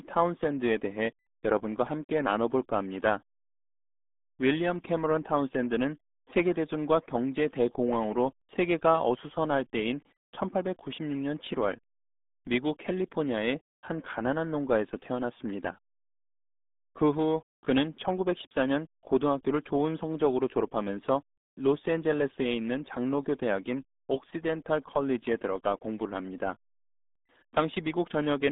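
Throughout, the speech carries RealAudio 14.4 codec damage. Nothing passes above 3.8 kHz. Heavy coding leaves it muffled and gargly, which fits an 8 kbit/s dial-up codec.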